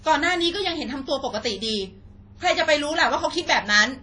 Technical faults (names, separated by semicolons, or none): WMA compression